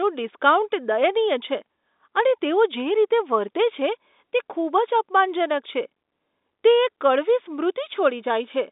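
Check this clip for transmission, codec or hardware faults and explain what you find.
I find no faults to explain in this clip.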